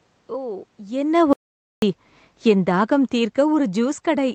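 Speech with audible room noise, passed through an Opus call path whose bandwidth tops out near 8 kHz. From 0.95 s to the end at 4.3 s, automatic gain falling sets in: the gain control judged the input too loud or its background noise too strong and steadily pulled its level down, so the voice and its background noise sink together. The talker also shifts position around 1.0 s. From 1.33 s to 1.82 s an audio dropout to silence leaves a 0.49 s gap of silence with no room tone, likely from the input momentarily disconnecting or muting while recording continued.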